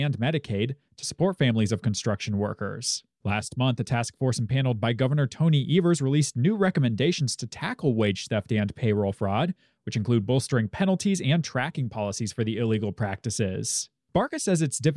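No technical faults can be heard anywhere in the speech, and the signal holds steady throughout.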